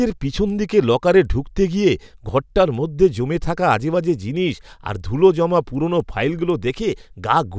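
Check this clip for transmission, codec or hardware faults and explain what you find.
One fault runs through the whole clip of speech: the resampler restarts on every block. From start to finish, the converter treats each 250 ms block as if nothing came before or after it, so it fills in its filter edges with silence or wrapped-around samples instead of the real neighbouring audio. Each block boundary picks up a small error, heard as a steady tick four times a second (4.0 Hz) that appears only while speech is present. The pattern fits a conversion from 24 kHz down to 16 kHz.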